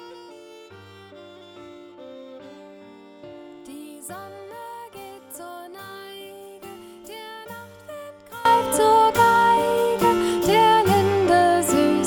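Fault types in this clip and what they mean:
One channel inverted: From the start to about 8.45 s, the sound collapses when heard summed to mono, dropping by about 21 dB and turning faint, with the centred, solid part of the mix largely gone. That points to one side of the stereo pair likely having its polarity flipped, so the material common to both channels cancels and only the difference between left and right is left behind. After 8.45 s the full, solid sound returns.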